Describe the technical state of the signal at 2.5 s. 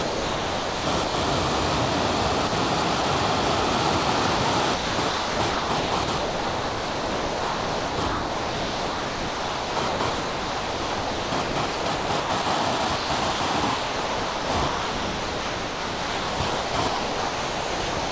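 From 2.48 to 2.52 s, about 40 ms of the sound is missing, replaced by a short patch of flat, steady noise before the signal resumes. This is likely sound dropped by the voice detector: the sending side judged that stretch to be background, stopped transmitting, and the receiver filled the gap with comfort noise. On a waveform the envelope drops to a thin, even band; on the spectrogram a narrow vertical strip of uniform low-level noise replaces the structured content, which, like the rest of the call audio, stops at 8 kHz.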